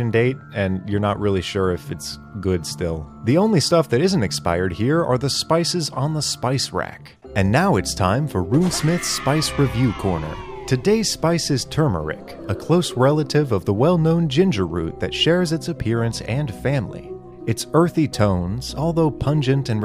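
There are no technical faults to describe in this audio.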